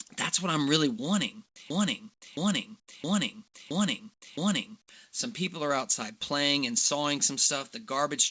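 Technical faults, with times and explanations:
0.08–0.10 s, sound dropped by the voice detector: about 20 ms of the sound gives way to steady, featureless noise before the speech resumes. The likely cause is the sender's voice detector judging the sound as background and halting transmission, with the receiver filling in comfort noise.
1.46–1.56 s, 2.14–2.22 s, 2.80–2.88 s, 4.14–4.22 s, comfort noise in place of the background: in these 80–100 ms pauses the real background, about 43 to 47 dB below the loud speech, becomes flat synthetic hiss about 9 to 12 dB quieter. This likely comes from discontinuous transmission, where the receiver generates noise during silence. The band stops near 8 kHz, which fits a G.722 call codec.
1.70–4.89 s, broken-record loop: a 0.67 s fragment repeats exactly, back to back, five times, and the speech that belonged in those three seconds never plays. This likely points to a stalled player, encoder or stream that kept resending the last buffered fragment.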